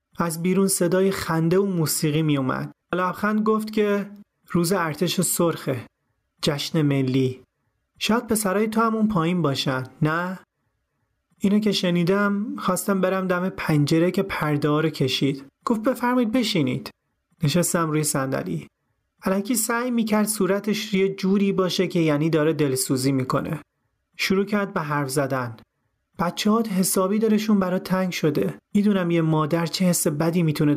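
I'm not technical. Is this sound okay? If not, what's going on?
No. Throughout, loud and soft parts of the speech end up closer in level, and the sound is squashed. That's gain pumping, likely from the recording level being set far too high, so an automatic level control keeps yanking it down. Unlike a noise gate, it doesn't cut sound to silence; it squashes the levels together.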